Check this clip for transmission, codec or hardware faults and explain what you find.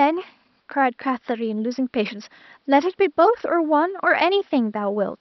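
No faults turn up in this clip.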